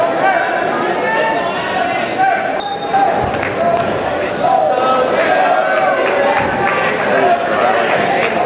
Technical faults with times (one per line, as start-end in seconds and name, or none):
2.60-2.62 skip ahead
2.69-4.61 jitter buffer speed-up